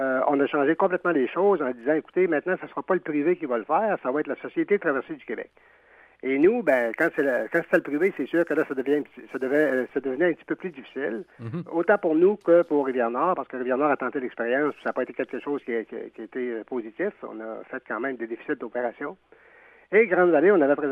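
From 6.66 to 9.93 s there's sample clock jitter: a wobbly converter clock of a few microseconds smears the timing, adding a grainy hiss roughly 35 dB down that swells on loud, bright passages.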